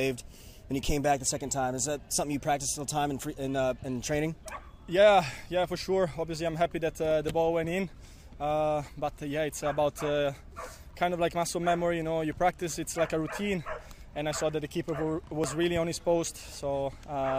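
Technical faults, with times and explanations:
7.34, 10.40 and 15.44 s, dropped buffer (overrun): each is a short jump where the audio skips forward, skipping only a few milliseconds with no gap of silence. The likely cause is samples being overwritten before they were read, so the two sides of the loss join directly.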